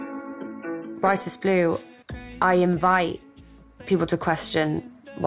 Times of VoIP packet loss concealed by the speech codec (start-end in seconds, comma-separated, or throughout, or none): none